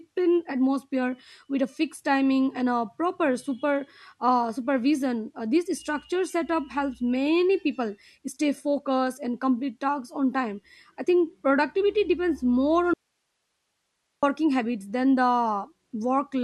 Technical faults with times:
12.94-14.23 audio dropout to a faint residue

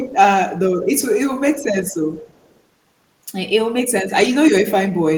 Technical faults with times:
0.83-1.00 echo leak
1.53-1.64 echo leak
2.26-2.59 echo leak

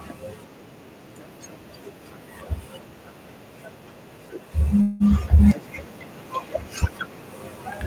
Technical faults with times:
4.55-5.64 automatic gain rising
4.81-5.03 call audio freeze

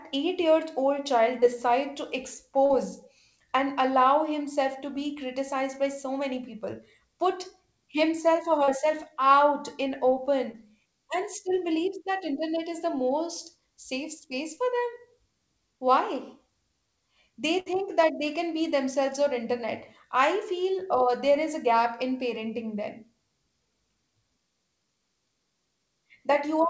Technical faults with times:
1.40-1.44 short concealed packet loss
2.66-2.72 short concealed packet loss
8.64-8.69 short concealed packet loss
10.51-10.56 short concealed packet loss
17.60-17.68 burst of packet loss

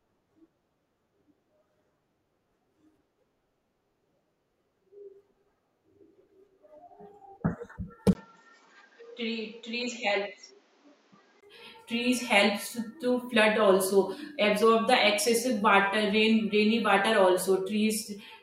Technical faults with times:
8.13-11.43 input switched to a poorer device

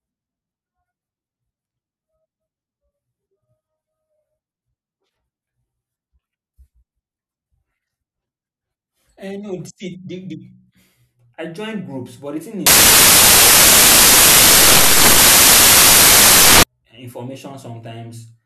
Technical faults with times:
12.66-16.63 samples built from the wrong bytes

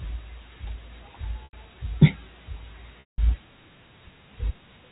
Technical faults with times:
1.44-1.53 packet loss with pitch repetition
3.00-3.18 packet loss with pitch repetition

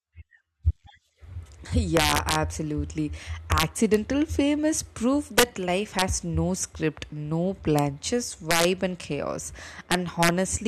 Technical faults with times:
1.97-2.35 integer overflow
3.52-3.94 integer overflow
5.38-5.43 integer overflow
5.99-6.02 integer overflow
7.79 integer overflow
8.51-8.64 integer overflow
9.92-10.29 integer overflow

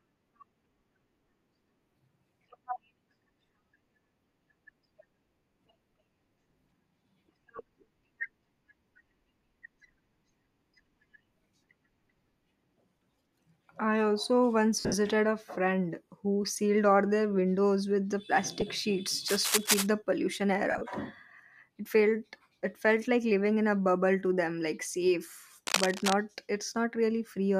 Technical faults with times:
7.57-7.59 lost LE Audio frames
14.80-14.94 lost LE Audio frames
18.61 lost LE Audio frames
19.28-19.87 cable scratch noise
20.71-20.81 lost LE Audio frames
25.67-26.13 cable scratch noise

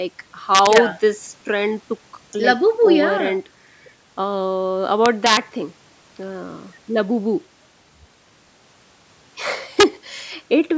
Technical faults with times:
0.55-0.78 integer overflow
5.06-5.37 integer overflow
9.80-9.83 integer overflow

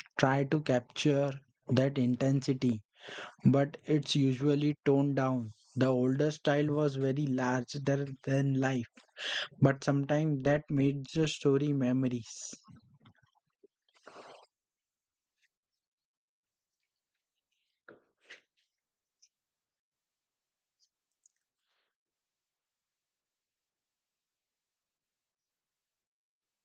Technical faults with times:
none

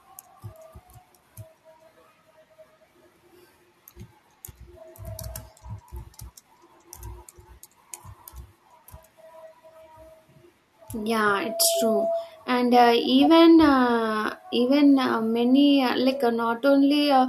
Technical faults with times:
11.30-12.37 loudspeaker feedback squeal

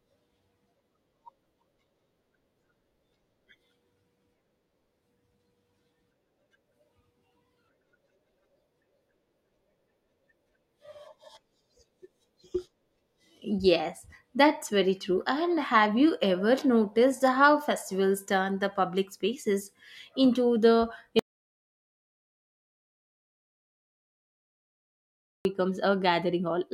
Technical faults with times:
21.19-25.45 audio dropout to silence

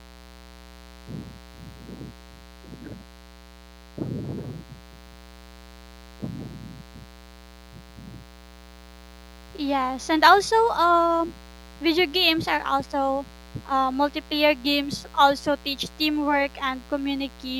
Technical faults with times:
0.00-17.60 mains buzz

